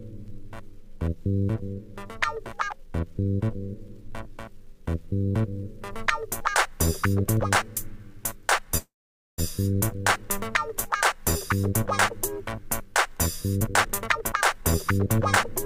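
At 8.77 s a call audio freeze holds the sound for about 0.6 s until 9.40 s, with the last sound carried on briefly as a fading buzz, then around 0.49 s of silence. The stall was likely caused by delayed packets draining the jitter buffer. Playback resumes where it stopped, so nothing is lost but the audio now runs later.

From 13.55 s to 15.64 s a jitter buffer speed-up plays the audio at 125% speed while keeping its pitch. The receiver trims many short pitch-period slices to shed the extra delay, roughly half a second in total, which makes this stretch sound hurried.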